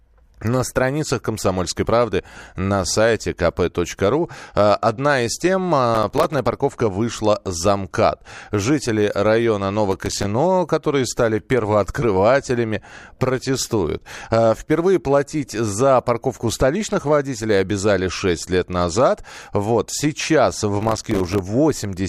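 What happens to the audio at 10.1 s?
Processor overload crackle from 9.91 to 10.25 s: the processor missed about thirty buffers of roughly 3 ms, each leaving a silent gap, heard as gritty crackle over the speech.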